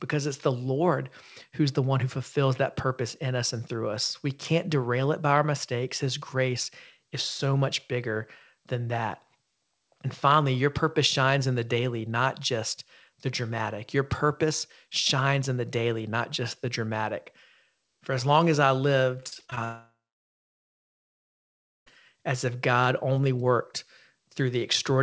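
Just after "as long as I", from 19.20 to 19.58 s, repeated packet loss breaks up the sound. Short holes, the longest about 35 ms, are patched by stretching the last sound. About 38% of that stretch is patched this way. It sounds choppy and robotic.

From 19.64 to 21.88 s, the audio drops out. A long network dropout is the likely cause. The last sound carries on briefly as a fading buzz or hiss. Then about 1.9 s of near silence follows. The sound returns at "as if", with the missing part gone.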